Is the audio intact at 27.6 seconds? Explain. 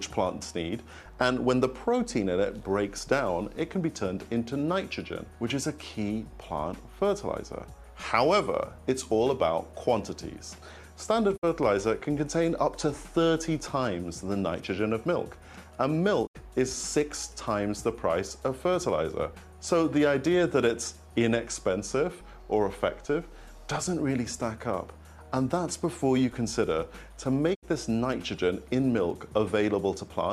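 No. A digital broadcast dropout runs from 27.53 to 27.65 s: the receiver stopped getting good frames and muted, fading out over 20 ms. About 72 ms of programme is simply gone, not smeared or concealed as with packet-loss concealment, which fits a few lost frames.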